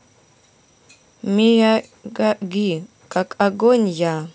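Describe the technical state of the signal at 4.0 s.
At 4.0 s the speech signal is intact, with no audible fault at that point.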